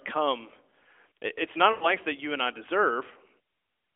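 From 1.72 to 1.87 s, lost AMR speech frames: about 100 ms of speech, which fits five 20 ms frames, failed to arrive intact. The narrowband decoder stretched the last good pitch and vocal tract settings with falling gain, so the sound drags and fades rather than cutting abruptly to silence.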